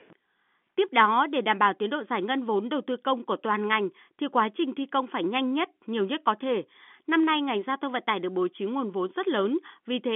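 No technical faults can be heard in this speech. It comes over a G.711 telephone line, so the sound is held to roughly 200 Hz to 3.5 kHz, with nothing above about 3.7 kHz.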